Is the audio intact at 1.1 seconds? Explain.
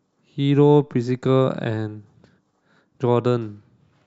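Yes, at 1.1 seconds the speech runs on cleanly, with no dropout, click, distortion or other audible fault at that point.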